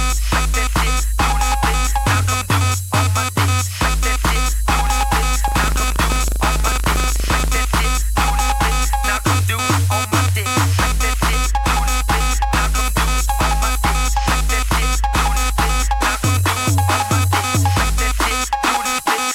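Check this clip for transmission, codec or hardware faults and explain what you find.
One fault stands out. Buffer tearing runs from 5.44 to 7.59 s. The writer and the playback hardware have drifted so they cross every period, and a sliver of each buffer carries audio roughly 70 ms stale, spliced with hard edges. That produces a steady robotic rattle at 25 Hz, which fits a 40 ms buffer.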